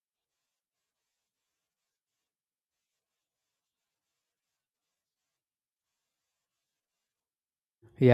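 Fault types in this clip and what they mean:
Dropped buffer (overrun): At 1.42 s and again at 7.2 s the speech jumps forward, and there's no gap of silence, just a seam where the sound snaps ahead. Each skip loses roughly 30 ms. The likely cause is the software falling behind and not reading its samples before the hardware wrote over them, so that slice vanished and the audio on either side got stitched straight together.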